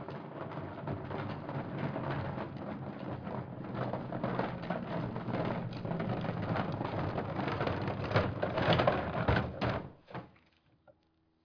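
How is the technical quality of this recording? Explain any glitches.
No technical glitches can be heard anywhere in the recording. The sounds come through steadily, with no breaks, jumps or other disturbances.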